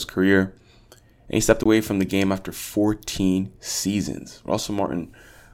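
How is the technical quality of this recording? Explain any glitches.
The recording has one glitch, a block of digital silence. At 1.64 to 1.66 s, between "he stepped" and "away from the game", the audio drops out for 20 ms. A block of zeros replaced the signal. The sound stops and resumes abruptly, with no fade, leaving a brief hole.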